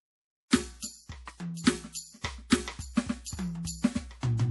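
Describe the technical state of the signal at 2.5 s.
Pre-echo runs from 2.48 to 2.52 s, a smear of about 34 ms. The codec spreads its quantisation noise across the whole transform block, so the quiet moment ahead of this attack fills with hiss. Unlike a click or dropout, it arrives before the hit and softens it.

Throughout the music, and so at this moment too, the sound has a watery, swirly quality with nothing above 11.5 kHz, likely from MP3 compression at a low bitrate consistent with about 48 kbps. This differs from a plain low-pass filter, which gives a clean dull top without the shimmering, frame-to-frame flicker of dropped frequency lines.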